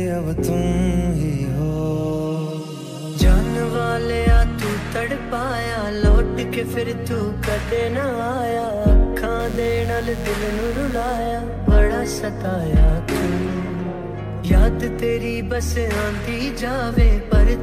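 From 9.40 s to 11.17 s, interference from the 60 Hz mains supply gets into the signal path, most plausibly through a dimmer, a rectifier or an unshielded run that injects sharp switching spikes twice per cycle. The result is mains buzz, with a dense stack of 60 Hz harmonics stretching up to several kHz, heard as a steady, raspy buzz sitting roughly 20 dB under the sound for those 1.8 seconds before it stops.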